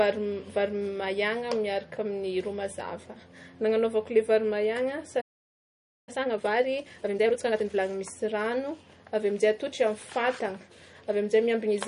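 Likely low-bitrate MP3 compression throughout this speech recording, consistent with roughly 40 kbps, cuts the treble and leaves a plainly audible watery, swirling texture with smeared consonant attacks. A playback stall, where the player probably ran short of data or was blocked, silences the audio from 5.21 to 6.09 s, a gap of about 0.86 s. From 6.09 to 7.81 s, time-compressed catch-up cuts and cross-fades small slices to clear the backlog, so the speech runs at 1.5 times normal speed with unchanged pitch.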